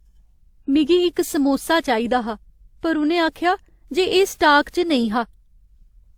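From start to finish the speech carries two layers of coding damage at once: the artefacts of one codec, with those of a second heard on top of them, and nothing above 20.1 kHz. The likely cause is transcoding between lossy codecs, a low-rate pass that fits Opus at around 32 kbit/s, then re-encoding to WMA at around 96 kbit/s. The second encoder spent its bits reproducing the first one's artefacts and added its own.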